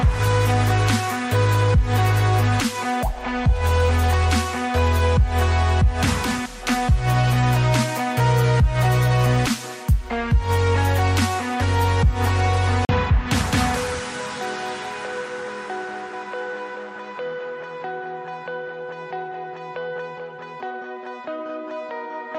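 At 12.85 s the sound drops out for 40 ms, returning at 12.89 s. This is a block of digital silence. A stretch of samples became zeros, with no fade either side. It is heard as a short hole.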